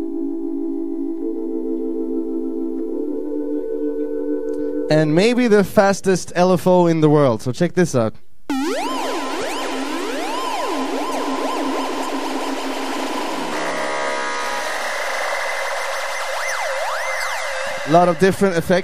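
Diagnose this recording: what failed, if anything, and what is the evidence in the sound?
The recording carries a DC offset from start to finish. By ear there is nothing to catch, but the whole waveform sits shifted off the zero line by a constant of about -30 dBFS, showing as steady energy at 0 Hz. This points to the analogue front end or converter, where a bias voltage or uncorrected input offset reached the digitised audio. The offset eats headroom on one polarity, so peaks on that side will clip earlier.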